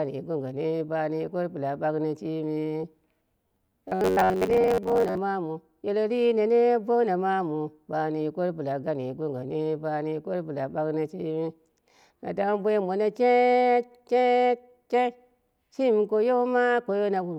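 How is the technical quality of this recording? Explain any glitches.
The recording has one clear glitch, a stretch of robotic sound from repeated short buffers between 3.48 and 5.19 s, ending just before "mawu yeletri ne bouna". There the speech hardens into a rigid, metallic buzz near 93.8 Hz that only loosely tracks the words. The likely cause is audio arriving too slowly, so the software loops a fragment of roughly 10.7 ms, which fits the buzz frequency, while about half of the real audio is skipped.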